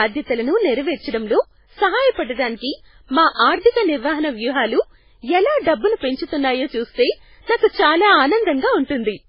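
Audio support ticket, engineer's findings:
Watery, swirling speech throughout, no content above 5.2 kHz, smeared attacks. Likely MP3 compression under heavy bit starvation, consistent with roughly 16 kbps, with treble cut and weak spectral lines dropping in and out.

Short hiss ahead of sharp onsets at 7.57 s and 7.68 s, each about 50 ms, attacks softened. Pre-echo: codec quantisation noise spread across the transform block, filling the quiet moment before each attack.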